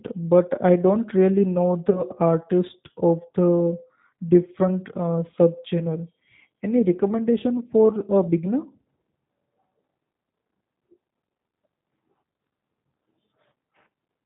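From start to finish the speech carries plainly audible G.729 coding at 8 kbit/s. The codec rebuilds each frame from a vocal tract filter, a pitch predictor and a few pulses. Nothing above 4 kHz survives. The voice sounds rough and slightly synthetic.

At 1.90 s there is VoIP packet loss concealed by the speech codec. About 20 ms of audio is missing, which fits one lost packet. The decoder stretches its last pitch and filter into a buzzy tone or coloured noise that fades. The sound stays weak or distorted until 2.03 s.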